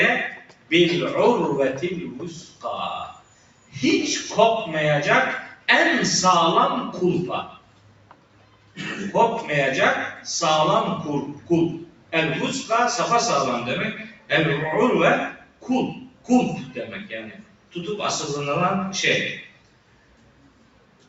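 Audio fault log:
Throughout: noise suppressor applied to music or sounds. A speech-oriented suppressor treats sustained, steady content as noise, so level breathes by about 10 dB. On a spectrogram, onsets stay bright while held partials and tails fade; the waveform envelope pumps.
0.31–0.71 s, 2.3–3.75 s, 5.5–5.68 s, 7.47–8.78 s, 11.36–12.13 s, 14.08–17.75 s, 19.46 s to the end: sound cut by the noise suppressor. Sustained or decaying passages were classed as noise and pulled down by about 11 to 12 dB. The waveform shows these stretches shrunken, and the spectrogram shows decays truncated, with a dark spectrum above 8 kHz from the call path.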